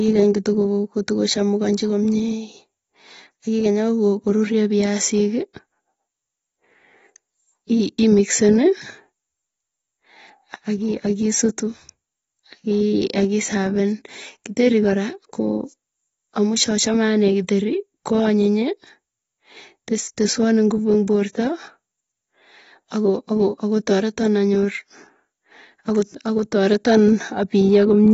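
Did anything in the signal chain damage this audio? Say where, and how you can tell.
Yes. The damage is at the codec stage and runs through the whole speech clip. It was likely AAC compression with the AAC-LC encoder starved of bits, at a rate that fits roughly 24 kbps. To save data the encoder cut the top of the spectrum, so nothing remains above 7.6 kHz and the speech sounds dull. The coarse quantisation of what was kept adds a plainly audible smeared, warbling texture on sibilants and sustained sounds.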